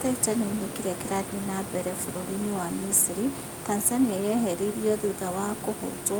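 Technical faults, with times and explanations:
No technical faults can be heard in this recording.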